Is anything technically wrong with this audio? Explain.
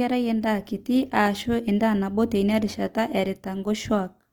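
Yes. Throughout the speech there is audible Opus compression damage, likely from Opus in its music mode, with the grainy, rough texture pointing to around 24 kbps. Bands stay filled with folded or noise-like content, so it sounds grainy and rough rather than swirling like MP3, and the bandwidth is not narrowed.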